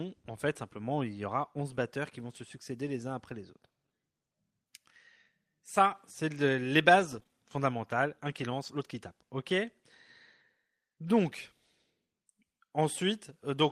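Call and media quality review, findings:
Scattered short gaps, 6.99–8.44 s. Symptom: brief ticks and smears in the speech, about three small holes, the longest around 20 ms, covering only about 4% of the span. Probable component: jitter buffer and packet loss concealment at the receiver. Mechanism: late or lost packets, each patched by extending the preceding audio.

Lost packet rebuilt from error correction, 9.50–9.52 s. Symptom: no dropout, but 20 ms of rougher, noisier speech, which fits a single lost 20 ms frame. Probable component: Opus decoder in-band FEC. Mechanism: the frame was recovered from the low-bitrate redundant copy carried in the following packet.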